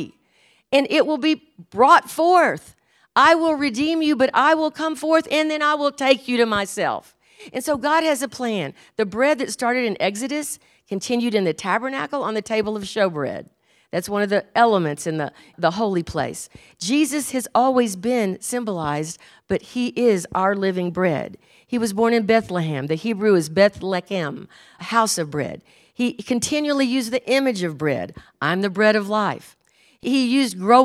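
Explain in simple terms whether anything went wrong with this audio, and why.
Nothing went wrong here: the speech comes across steadily the whole way, with no glitches, dropouts or odd noises to point to.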